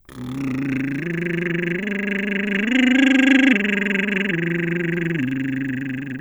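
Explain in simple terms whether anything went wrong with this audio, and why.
Nothing went wrong here: the music runs without any audible dropouts, glitches or distortion at any point.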